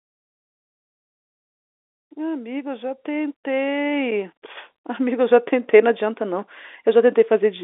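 No faults can be heard anywhere in this recording.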